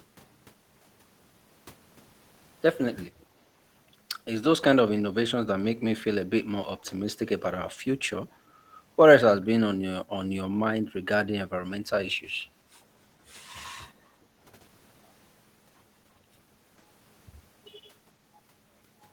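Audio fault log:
3.21–3.26 s, echo leak: a very faint speech copy, far below the speech level, arrives 436 ms late, likely loudspeaker pickup the echo canceller missed.
14.14–14.40 s, background gated by the echo canceller: room sound dips by about 7 dB for a third of a second while the canceller suppresses the microphone.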